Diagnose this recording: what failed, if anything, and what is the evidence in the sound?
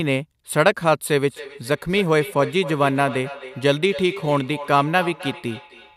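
The failure is in call processing: a feedback echo between two devices. From 1.29 s to the end of the clip, the speech returns at a steady interval of roughly 300 ms, with the repeats reaching about 14 dB below the direct speech. A second device in the same room is playing the call audio, and this microphone picks it up again. The local echo canceller only removes what its own loudspeaker plays, so it cannot cancel that path.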